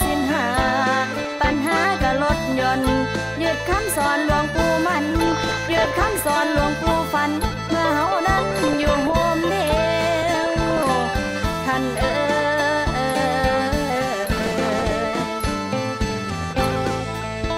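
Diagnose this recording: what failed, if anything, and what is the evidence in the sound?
DAB burbling at the reception and codec stage: short noise blips and sub-band level jumps over the sound at 1.14–1.49, 5.22–6.22, 8.51–9.12, 10.19–10.89, 14.32–14.92 and 16.01–16.76 s. Weak reception leaves bit errors, roughly one percent at worst, that slip past error correction and corrupt MP2 scale factors, so single sub-bands jump for up to a frame. Packet-loss dropouts go silent; this does not.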